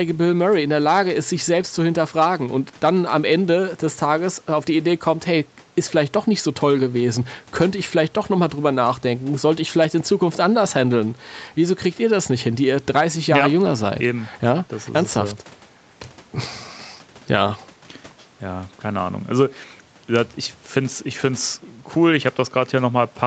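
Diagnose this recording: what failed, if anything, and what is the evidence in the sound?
Nothing failed; no faults present.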